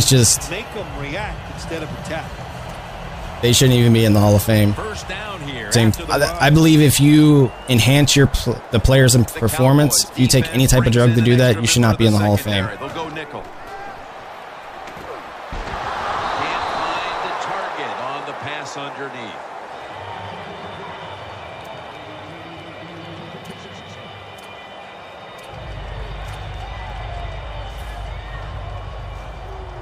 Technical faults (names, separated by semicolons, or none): none